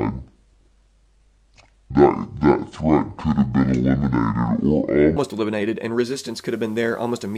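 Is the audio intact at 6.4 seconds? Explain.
No. From 5.94 s, just after "eliminated and", to the end at 7.37 s, the audio is in a digital radio blending to analogue event. The receiver lost its digital stream and cross-faded over about 0.46 s to the FM broadcast of the same station, so at 6.4 s the blend is just completing. The FM path drops the level by about 1 dB and brings up hiss roughly 35 dB below the signal.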